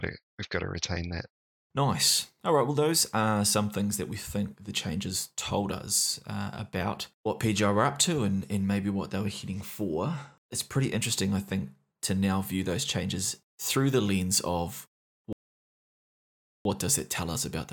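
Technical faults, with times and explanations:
15.33–16.65 s, rebuffering stall: just after "through the lens of" the speech drops to silence for about 1.32 s, then continues exactly where it stopped. The player exhausted its downloaded buffer and waited for more data, so nothing is lost but time is inserted.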